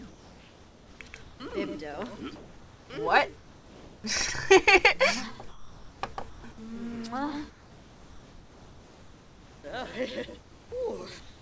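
The audio has passed through a call link, and its pauses do not carry the real background. Comfort noise in place of the background is heard from 0.08 to 1.52 s, 2.36 to 2.90 s, 3.36 to 4.04 s, 5.48 to 6.02 s, 6.30 to 6.44 s, 7.50 to 9.64 s, and from 11.20 s to the end. In each gap the background, about 21 to 26 dB below the loud parts, turns into steady, featureless hiss. It is about 1 to 4 dB quieter, with the biggest drop at 3.36 s. The likely cause is discontinuous transmission: the sender stops sending in pauses, and the receiver makes up shaped noise. At 1.50 to 1.52 s there is a sound dropped by the voice detector. A 20 ms piece of sound at the edge of the first gap is lost to that noise, likely because the detector took it for background. Nothing is heard above 8 kHz, which fits a G.722 call codec at 64 kbps.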